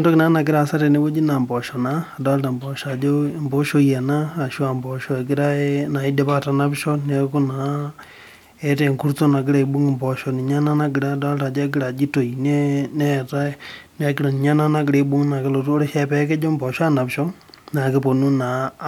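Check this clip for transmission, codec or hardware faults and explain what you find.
Nothing faulty turns up anywhere in this speech recording.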